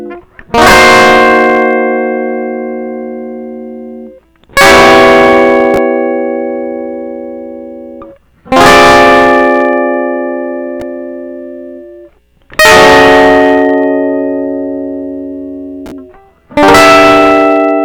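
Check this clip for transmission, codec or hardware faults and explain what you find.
Hard clipping affects the music in five bursts: 0.54–1.78 s, 4.57–5.83 s, 8.52–9.94 s, 12.59–13.97 s and 16.57–17.83 s. Each is driven about 19–22 dB past full scale, so peaks are sheared flat, giving harsh fuzz, squared-off waveform tops and bright harmonic smearing up the spectrogram.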